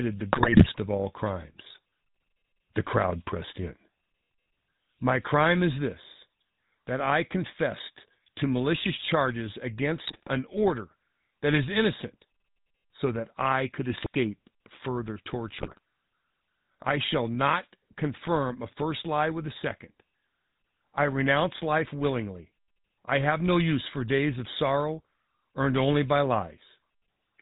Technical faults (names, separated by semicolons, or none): GSM full-rate codec; GSM bit errors